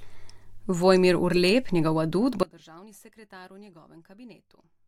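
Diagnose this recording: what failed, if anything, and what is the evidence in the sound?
The speech cuts off abruptly at 2.43 s, right after "njegov adut", and never returns. From there to the end only a faint residue remains, roughly 25 dB below the speech. This is an audio dropout to a faint residue, likely a failed analogue connection leaving a live but starved path.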